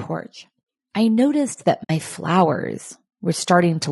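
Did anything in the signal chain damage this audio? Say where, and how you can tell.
Yes. Throughout, the speech sounds rough and grainy with noise between harmonics, likely low-delay AAC compression (AAC-ELD) at a low bitrate, which suits about 32 kbps. This is codec damage, not analogue noise.

At 1.83 to 1.90 s, a 60 ms soft-faded hole marks AAC frame loss with muting on the network path. A hard dropout would click.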